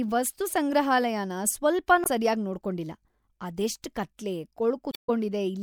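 At 2.03 to 2.07 s, just before "ಸರ್ಯಾಗ್ ನೋಡ್ಕೊಂಡಿಲ್ಲ ಅದೆಷ್ಟ್ ಕತ್ಲೆ", and again from 4.90 to 5.10 s right after those words, the speech breaks up. This is damaged data in a compressed stream. Corrupted bytes make the decoder misread frames and hunt for the next valid header. Each event is short, the longer one near 0.2 s.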